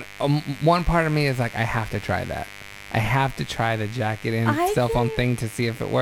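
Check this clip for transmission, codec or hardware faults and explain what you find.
A steady, raspy mains buzz runs under the speech for the whole clip, sitting roughly 20 dB below it. Sharp spikes repeating at twice the 50 Hz mains frequency leak in through a dimmer, rectifier or poor shielding, spreading harmonics up into the kilohertz range.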